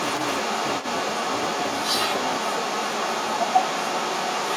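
From the first moment to the end, a block size mismatch (truncated) runs through the speech. The end of each block is thrown away. A 172 Hz buzz follows the block rate, which fits 256-sample blocks being read. The speech runs 1.88 times fast at about normal pitch.

Across the whole clip, a delayed copy of the speech follows about 189 ms behind. It sits clearly louder than the direct speech. This sounds like an echo leak, likely from a loudspeaker on the far side whose echo canceller let its microphone pickup through.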